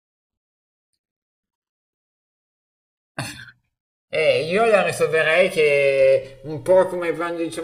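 Speech recorded on two channels drifting apart: their clocks differ by a few hundred parts per million, so the inter-channel delay grows to roughly 3 ms by the end. Unlike a fixed offset's static comb, the mono notches keep sweeping, heard as slow flanging.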